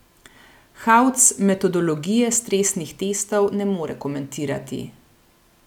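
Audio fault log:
Nothing to log here, as the speech comes across without any audible technical problems at any point.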